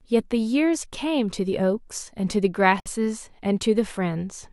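It's a speech clip with a gap at a join of encoded pieces. At 2.80 s the sound drops out for about 58 ms, to 2.86 s, then picks up right where it left off. The edges are smeared, which fits two separately encoded segments butted together with the encoder's leading delay and end padding left untrimmed.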